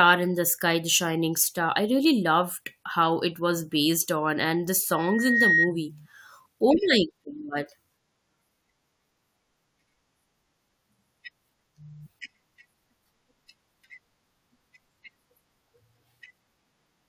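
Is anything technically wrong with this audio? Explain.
Yes. Right after "based on and the", from 4.91 to 5.72 s, there is loudspeaker feedback squeal: the microphone hears its own loudspeaker, and at 1.9 kHz the loop gain passes unity, so that tone feeds on itself. It swells over about half a second into a piercing whistle that ends up a few decibels louder than the speech. That build-up from nothing is what marks it as feedback rather than a steady interfering tone, which would sit at a constant level from its first instant.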